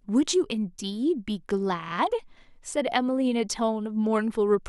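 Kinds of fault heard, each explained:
Bluetooth stutter: A packet on the wireless link arrived too late or went missing, so the receiver refilled the gap by replaying the last chunk of audio it held. In this speech clip that happens once, from 1.88 to 1.92 s. About 23 ms of sound is repeated, which points to a single dropped packet, and it is heard as a brief doubled fragment. The speech then resumes further on, as though it had kept playing through the gap.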